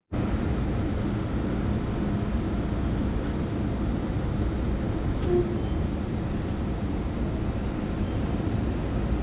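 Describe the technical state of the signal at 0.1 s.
At 0.1 s the signal is intact, with no audible fault at that moment.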